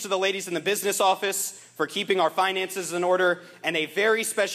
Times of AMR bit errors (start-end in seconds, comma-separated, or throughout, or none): none